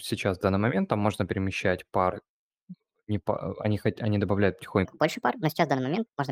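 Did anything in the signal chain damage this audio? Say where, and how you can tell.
Yes. From 4.85 s to the end, just after "они хоть они добавляют", the speech jumps 1.38 times faster and 5.55 semitones higher. This is a wrong sample rate at playback: the samples are clocked out unconverted, which fits 32 kHz material played at 44.1 kHz.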